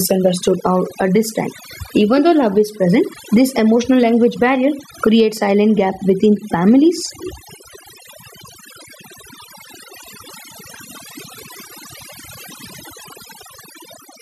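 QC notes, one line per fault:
Throughout, overdone noise removal: bands near noise floor are gated out, leaving near-silent gaps with twinkling specks; spectrogram shows holed, speckled background.
Throughout, gain pumping: gain is pulled down about 15 dB on loud syllables, likely excess gain into a fast limiter; waveform looks flattened.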